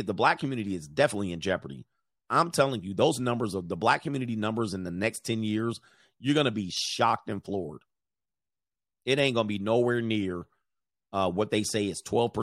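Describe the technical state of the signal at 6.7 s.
At 6.7 s the speech signal is intact, with no audible fault at that moment.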